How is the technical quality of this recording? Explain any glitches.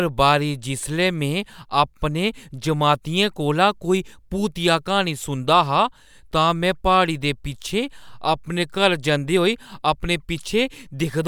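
The recording carries the speech without any technical disruption that a careful listener would pick up, so there are no glitches to explain.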